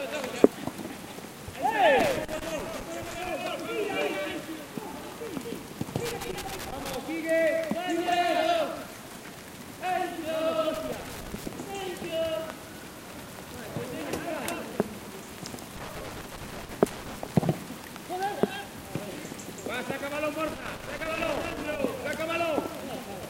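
Loose connector crackle breaks out five times: 1.99–3.30 s, 6.05–6.95 s, 10.74–11.46 s, 15.76–17.29 s and 20.48–21.79 s. A worn or dirty contact keeps making and breaking, chopping the audio into irregular bursts of scratchy crackle.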